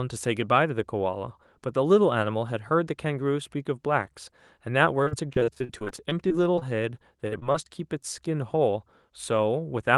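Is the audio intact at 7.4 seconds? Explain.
No. Between 7.28 and 7.45 s, with a second gap at 7.40 to 7.43 s, short concealed packet loss replaces about 40 ms and 20 ms of missing audio with an extrapolation of the preceding sound. It is heard as a brief smear or wobble, shows on a spectrogram as a smoothed continuation of the preceding spectrum, and appears on the waveform as continued signal that blends back in.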